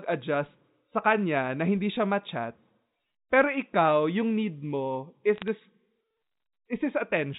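From 5.36 to 5.48 s, bit errors on a digital phone line corrupt isolated samples, producing sharp ticks over the speech, seen as single-sample waveform spikes and thin vertical spectrogram lines within the 4 kHz G.711 band.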